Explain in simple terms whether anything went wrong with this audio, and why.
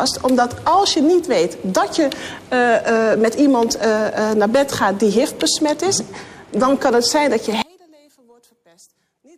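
Something goes wrong near the end. From 7.62 s to the close, the sound drops sharply and nearly disappears, leaving only a faint remnant. The likely cause is one channel inverted: one side of the stereo pair has its polarity flipped, so it pushes while the other pulls. When both sides are combined into one, everything they share cancels out, and only the small differences between them survive.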